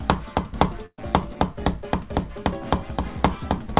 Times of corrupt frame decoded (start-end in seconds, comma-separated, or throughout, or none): none